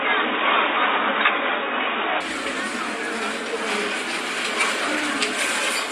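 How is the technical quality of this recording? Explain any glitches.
Input switched to a poorer device, 0 to 2.21 s: the likely cause is a lower-grade input, which cuts everything above 3.8 kHz and sounds dull and boxy, a few dB different in level, before clearing without a gap.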